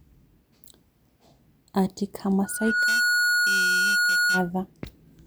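At 2.44 s a loudspeaker feedback squeal begins. The microphone is picking up its own loudspeaker, and the loop gain tops one at 1.4 kHz. That tone swells in under half a second to roughly the level of the speech, then holds until 4.50 s.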